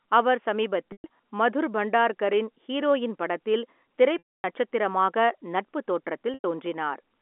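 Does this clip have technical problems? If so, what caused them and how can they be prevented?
Yes, there's packet loss with pitch repetition in three spots: 0.92 to 1.04 s, 4.18 to 4.44 s right after "ஹீரோயின் படத்தில்", and 6.34 to 6.44 s. Audio went missing for 120, 260 and 100 ms. The receiver covered each gap by looping the last pitch cycle, which gives a brief buzzy hold. The 260 ms gap is long enough that the loop fades toward silence before speech cross-fades back in. A jitter buffer with some headroom plus forward error correction or redundancy on the link would keep those gaps from reaching the listener.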